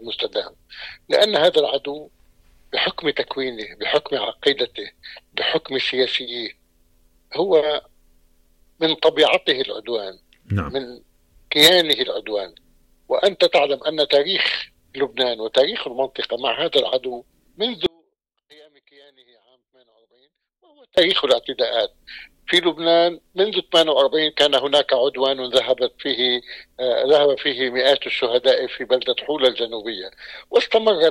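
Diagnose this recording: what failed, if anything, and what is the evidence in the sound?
Audio dropout to a faint residue, 17.86 to 20.98 s: the sound cuts abruptly to a leak about 35 dB down, likely an intermittent analogue connection upstream.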